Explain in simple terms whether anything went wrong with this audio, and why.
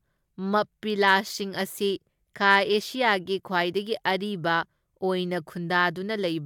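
Nothing went wrong here.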